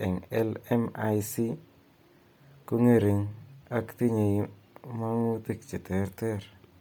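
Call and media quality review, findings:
Bluetooth LC3 compression, likely from an LE Audio link, throughout. The codec is starved at a rate that fits about 32 kbps with 10 ms frames, so much of the upper spectrum is zeroed and refilled with noise. The result is a breathy, grainy edge on the speech and heavy codec damage, with nothing above 20.2 kHz.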